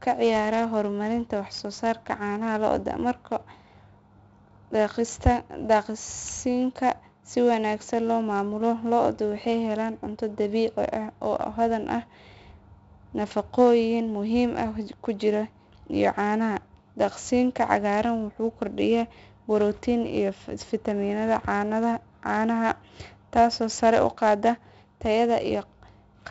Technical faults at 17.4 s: 4-bit ADPCM compression

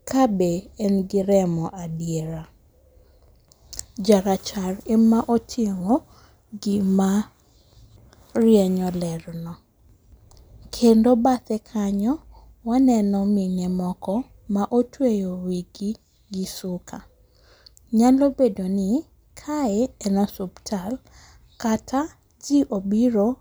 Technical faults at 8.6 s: none

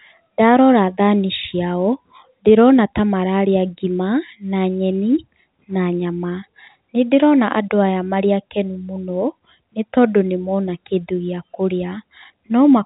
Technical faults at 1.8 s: none

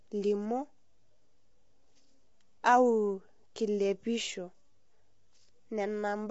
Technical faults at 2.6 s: low-delay AAC compression

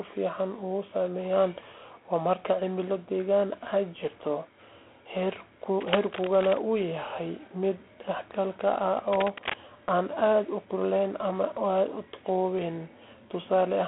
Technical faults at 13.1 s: G.726 ADPCM

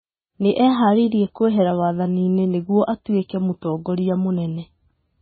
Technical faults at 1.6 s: MP3 compression

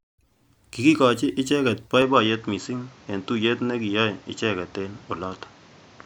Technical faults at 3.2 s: input switched to a poorer device

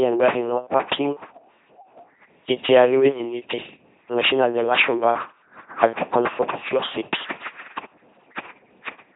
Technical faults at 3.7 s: LPC-10 vocoder

